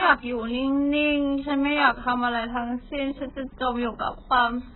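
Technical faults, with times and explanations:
Throughout, AAC compression: the speech sounds dull, muffled and smeared, with a watery, warbling texture on vowels and a fizzy, grainy edge on sibilants. Nothing remains above 4 kHz. The heavy damage points to a very low bitrate, in the region of 8 kbps, and this is likely AAC-LC, which drops bands it cannot afford. A spectrogram would show a hard ceiling at 4 kHz and patchy, holed bands below it, while the waveform looks ordinary.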